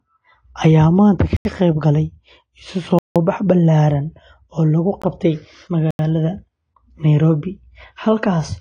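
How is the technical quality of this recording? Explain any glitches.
The technical quality is poor: the whole recording carries codec damage, and the speech drops out four times.

AAC compression, throughout: the band ends sharply at about 10.1 kHz, and sibilants sound dull and swirly. This is likely low-bitrate AAC-LC, around 32 kbps, whose hearing model discards detail and smears what remains.

Block of digital silence, at 1.37–1.45 s, 2.99–3.16 s, 5.02 s and 5.91–5.99 s: the sound cut out and back with no fade. The 85 ms and 171 ms holes fit 4096- and 8192-sample buffers, and the 18 ms one is a short hole.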